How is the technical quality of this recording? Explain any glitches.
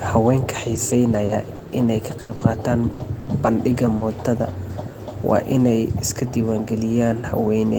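The recording has one fault. From 0.75 to 4.03 s there is repeated packet loss, giving a robotic sound. Seven gaps occur, the longest 80 ms. Each is patched by carrying the last sound forward. About 12% of that stretch is concealed. The speech turns choppy, with pieces missing.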